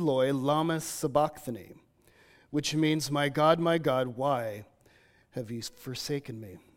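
No technical faults can be heard anywhere in the speech. Nothing in the audio needs a time mark or an explanation.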